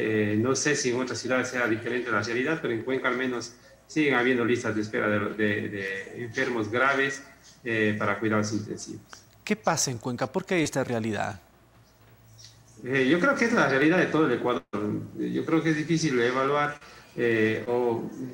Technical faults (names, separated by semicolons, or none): short concealed packet loss; long network dropout